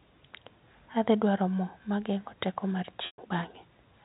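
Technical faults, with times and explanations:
3.06–3.18 s, packet loss with pitch repetition: a 120 ms gap, fitting four 30 ms packets, is bridged by repeating the last pitch period. The sound turns buzzy and held, then fades to silence before a cross-fade, unlike an abrupt dropout or click.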